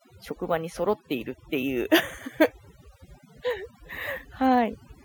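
From start to finish the background is pulled down and flecked with twinkling specks. This is overdone noise removal: a noise reducer set too strong cuts individual frequency bands near its noise estimate, taking quiet parts of the voice too.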